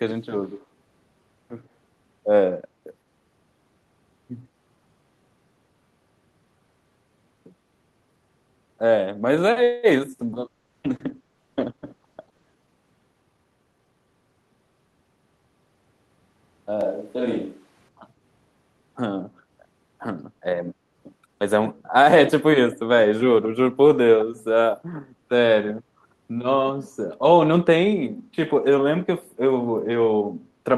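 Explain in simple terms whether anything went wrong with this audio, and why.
Echo leak, 0.61 to 0.65 s: a very faint second copy of the sound arrives about a tenth of a second (103 ms) behind the original and lasts only a few hundredths of a second. This is likely the far end playing the call through a loudspeaker, with its microphone catching that sound and its echo canceller failing to remove all of it, so a scrap was sent back into the call.

Call audio freeze, 9.63 to 9.86 s: the sound briefly hangs, stretched into a short fading buzz for about a fifth of a second (199 ms), then carries on without skipping anything and without dropping to silence. The likely cause is audio packets getting held up on the network, leaving the receiver with nothing new to play. It filled the wait by extending the last bit of sound, so the rest of the audio arrives that much later.

Call bitrate drop, 10.23 to 13.30 s: for about three seconds the sound turns rougher and smeared, and is at its worst for about 2.3 s. 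The call decided its connection had become weaker and told the encoder to use only half as many bits. With less data available, the encoder described the sound more crudely until the rate recovered.

Jitter buffer speed-up, 13.22 to 14.14 s: for just under a second the audio runs noticeably fast, at about 122% of normal speed, while the pitch stays the same, so it sounds hurried. Delayed audio had piled up in the receiver's waiting store. To catch up, the receiver cut out many tiny slices, about a fifth of a second in total, so playback got back to live.

Switch to a distant microphone, 16.81 to 17.89 s: for about a second the sound suddenly becomes hollow and roomy, with less low end and faint background noise, at about the same loudness as before. Then it snaps back. The likely cause is that the close microphone briefly dropped out and the recording fell back to a microphone further away, which picks up more of the room.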